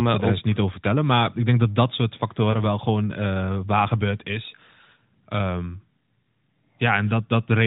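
At 2.52 to 2.57 s, between "denk dat dat soort" and "wel gewoon uh waar", a lost AMR speech frame causes a brief warbling dip, consistent with one concealed 20 ms frame in the narrowband stream.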